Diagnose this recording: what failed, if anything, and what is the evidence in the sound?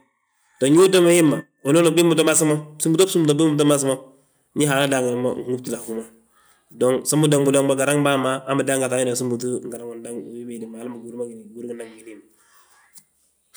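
Nothing stood out on listening to this speech recording, and no stage in the chain shows any sign of having failed.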